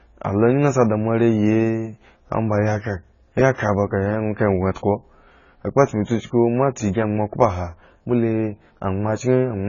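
AAC compression throughout: nothing above 7 kHz, and the speech sounds dull, smeared and warbly on sibilants. The likely cause is heavy quantisation at a bitrate near 16 kbps.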